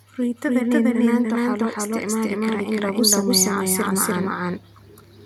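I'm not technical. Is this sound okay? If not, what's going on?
No. The first problem is a doubled audio track, running through the whole clip. Every sound is heard twice: a second copy follows about a third of a second behind and is roughly as loud as the first, so the speech sounds like it's stepping on itself. The echo is clean, with no roomy fade, because it isn't a real echo. Most likely the same speech was picked up twice, once through a slower route, and both got mixed together.

The second problem is automatic gain rising, from about 1.31 to 4.43 seconds. Over those few seconds the overall volume creeps up slowly, and the voice and the background noise grow louder together. This happens when a recording device decides the sound is too quiet and turns its own volume knob up gradually, so both get lifted at once.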